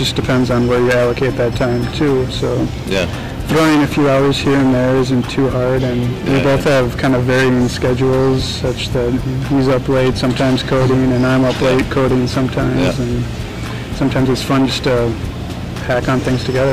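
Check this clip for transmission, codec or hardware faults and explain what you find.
The clip has one fault, hard clipping, present from start to end. A stage was driven about 21 dB past what it could pass, so about a fifth of the waveform had its peaks sliced flat. Those flat tops add high harmonics, heard as a harsh fuzz on every loud sound.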